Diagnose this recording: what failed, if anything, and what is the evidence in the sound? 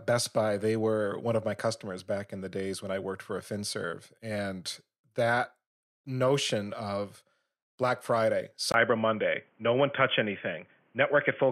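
At 8.72 s the speech abruptly turns dull and boxy, and stays that way to the end. A gap of about 20 ms marks the change. After it, nothing is heard above 3.4 kHz. New background noise appears, roughly 40 dB below the speech. Loudness stays about the same. The stage is the driver's input routing. The system likely switched its input to a poorer device, such as a headset's narrowband call profile.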